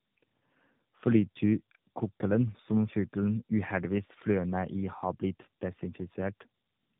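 Throughout the speech, tandem speech coding is audible: the signal sounds like two narrowband coders in a row, which fits AMR-NB links joined through a G.711 hop. Nothing reaches above 3.8 kHz, and each re-encoding compounds the roughness, muffling and warble.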